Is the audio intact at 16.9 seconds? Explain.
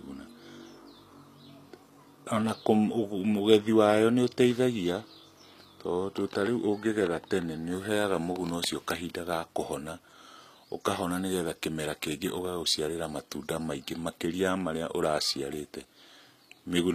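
No. At 16.9 seconds the speech still carries the damage heard across the whole clip, plainly audible and likely HE-AAC compression. The treble is rebuilt by copying lower bands upward, so it mismatches the real harmonics. S sounds turn gritty and lispy. This fits a low bitrate near 24 kbps.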